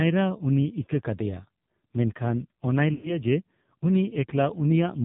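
Speech that sounds thin, buzzy and synthetic throughout, boxed into a narrow telephone band with nothing above 4 kHz. That is the AMR narrowband mobile codec: an 8 kHz vocal-tract model coded very sparsely, with heavy damage that points to a low mode around 5.9 kbps. From 2.94 to 3.17 s the speech smears into a drawn-out, fading warble before returning rough. These are lost AMR speech frames: the decoder repeated its last good settings at falling gain over about 100 ms of missing audio, which fits five dropped frames.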